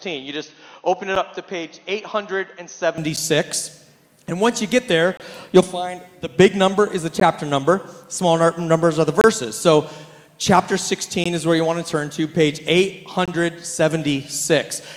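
For the first 2.98 seconds the audio is noticeably duller and boxier, with nothing above 6.4 kHz. It's a bit quieter too, roughly 5 dB down, and sits on a faint noise floor well beneath the signal. At 2.98 s it opens up cleanly with no dropout at the changeover. That's most likely the input switched to a poorer device: a narrower-band microphone or headset profile carrying the start, then the proper input taking over.

Running through the whole clip are gaps between stream segments. They're hard-edged silent holes roughly every 2 s, where consecutive chunks don't quite meet and the player pads the difference with silence. They fall at 1.15 s (about 9 ms), 3.16 s (10 ms), 5.17 to 5.20 s (26 ms), 7.2 s (15 ms), 9.21 to 9.24 s (26 ms), 11.24 s (16 ms) and 13.26 to 13.28 s (22 ms). Nothing's actually missing. Time is inserted, so each one reads as a tiny stutter or click-like break.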